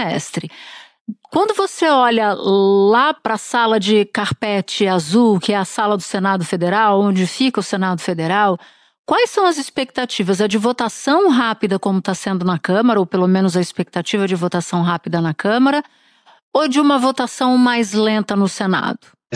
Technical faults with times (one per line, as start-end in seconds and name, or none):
none